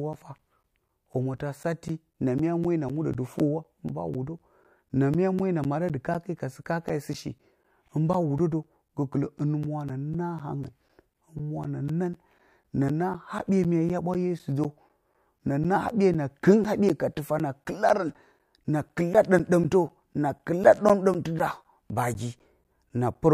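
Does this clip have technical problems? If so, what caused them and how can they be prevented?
Yes. Periodic USB or driver dropouts cause regular ticks in the speech every 0.25 s from 0.13 to 23.15 s. Each gap loses around 10 ms, replaced with silence. To prevent it, disable the background task or polling that stalls the USB audio driver.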